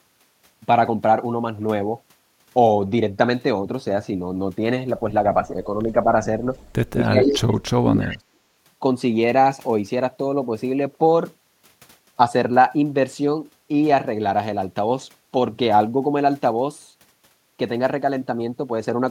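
At 5.84 s the speech briefly dips, likely speech suppressed in double talk, a shallow notch in the waveform. From 6.91 to 8.43 s it is pushed down steeply, a near-empty band on the spectrogram. Echo leak appears at 6.59 to 6.69 s and 8.01 to 8.18 s: a copy 233 ms late, faint at first and louder the second time, probably from the far-end canceller missing loudspeaker pickup, showing as smeared repeated harmonics.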